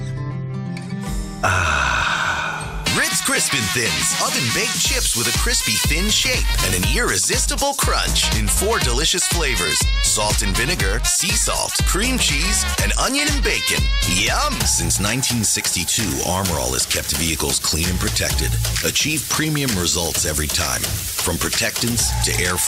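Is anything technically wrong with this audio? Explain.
No, nothing is technically wrong with this audio.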